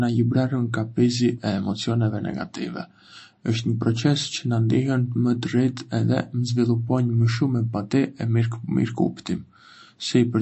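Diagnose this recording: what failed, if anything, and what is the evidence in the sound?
MP3 compression, throughout: nothing above 8.4 kHz, and plainly watery, swirling speech. At the codec stage, likely a bit-starved encoder cutting treble, consistent with about 34 kbps.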